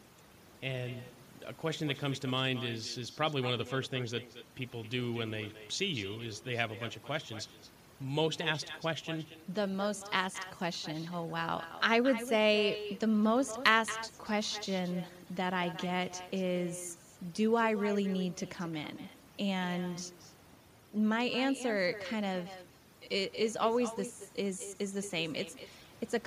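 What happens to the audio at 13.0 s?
At 13.0 s the speech is shaped by overdone noise removal, present through the whole clip. The suppressor was pushed too hard, so any frequency band that drifts close to its noise estimate is cut almost to nothing, and the softer edges of the voice are cut with it. The background is near silence with small twinkling specks. A spectrogram shows a black floor scattered with isolated bright dots, and speech harmonics that look patchy and moth-eaten.

Echo with no canceller is heard at the same moment, and it also runs throughout. A loudspeaker at the far end feeds the talker's voice back into that end's microphone, and nothing removes it, so each phrase returns about a fifth of a second later and about 13 dB quieter. The copy sounds thinner, like a trailing shadow. On the waveform, each burst of speech is followed by a smaller replica offset by that short delay. 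On the spectrogram, every syllable has a faint, duller twin just to its right.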